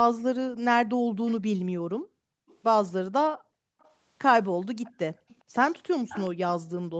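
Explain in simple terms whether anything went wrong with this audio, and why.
A couple of things went wrong here, both the kind you get when the other person is on speakerphone.

First, there's an echo leak. A faint, delayed copy of the speech trails the original by about 0.42 seconds, most likely because the echo canceller on the loudspeaker end let some of the sound its microphone picked up slip back into the call. It's quiet early on, from 0.56 to 1.34 s, then in brief scraps at 2.48 to 2.57 s and 3.8 to 3.92 s. From 4.84 s to the end it gets noticeably louder and runs continuously.

Second, the background is gated by the echo canceller. While the speaker was playing, the canceller clamped down hard on the microphone, so the room sound drops away almost to nothing and then comes back when it lets go. Between 1.77 and 3.8 s it cuts out in bursts adding up to about a second. There are shorter dips at 5.12 to 5.27 s and 6.61 to 6.72 s.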